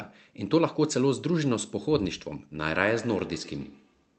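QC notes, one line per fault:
2.64–4.18 s, feedback echo between two devices: each word returns roughly every 150 ms, about 17 dB below the speech, as another device replays this microphone's audio.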